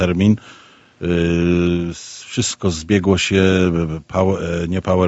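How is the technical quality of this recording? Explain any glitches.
The recording has two glitches, both close together in the middle of the speech. The sound is band-limited at 8 kHz throughout, which fits a call path.

From 1.97 to 2.35 s the background is gated by the echo canceller. The room sound drops away by up to about 40 dB for roughly 0.4 s. The canceller judged that the far-end loudspeaker was active. It then pulled the microphone level down hard to block any echo. The ambience vanishes briefly and then comes back as the canceller releases.

From 2.49 to 2.54 s there is a brief echo leak. A very faint copy of the speech appears, sitting far below the main signal and trailing it by 124 ms. Its likely cause is an echo canceller on a loudspeaker end that did not fully remove its own playback. The leftover was sent back down the line. It is heard as a short ghost of the sound.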